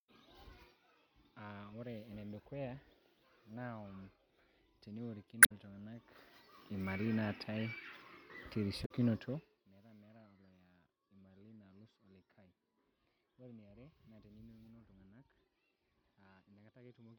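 Damaged data in a compressed stream hits this speech recording twice: from 5.40 to 5.52 s and from 8.82 to 8.91 s. At each point part of the compressed data is corrupt, so the decoder misreads or drops the affected frames, loses sync and has to hunt for the next valid frame header. The result is a brief glitch, roughly a tenth of a second long each time, that breaks through the speech before normal decoding resumes.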